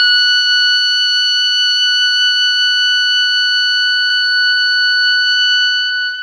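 At 4.06 to 4.10 s the music shows short concealed packet loss: about 20 ms of audio never arrived, and the receiver spent 30 ms extending the preceding sound and blending back. It sounds like a brief smear or wobble. On a spectrogram, harmonics run flat and blurred there.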